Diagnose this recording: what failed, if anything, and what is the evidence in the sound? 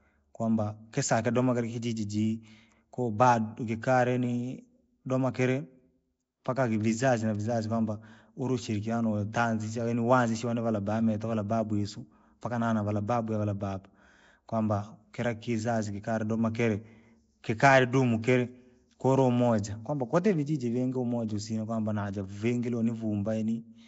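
Codec stage, throughout the recording: the speech has a rough, hissy halo, an underwater smear and nothing above 7.7 kHz, which fits Nellymoser compression at about 32 kbps, likely. Starved bands are filled with noise, so the hiss follows the speech, unlike steady background hiss.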